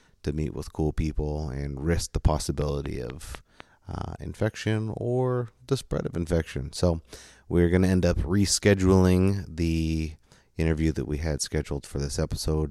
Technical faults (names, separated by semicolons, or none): train of clicks